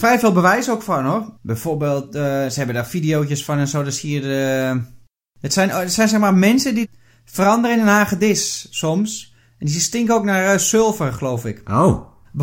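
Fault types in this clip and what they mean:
No technical faults are audible in this speech recording.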